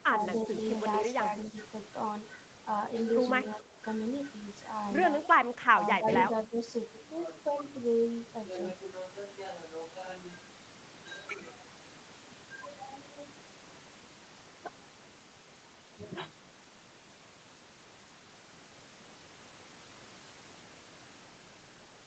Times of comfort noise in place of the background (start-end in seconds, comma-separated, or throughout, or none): none